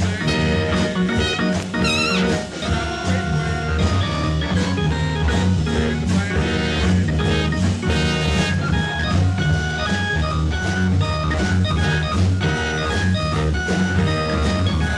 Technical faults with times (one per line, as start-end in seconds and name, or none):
none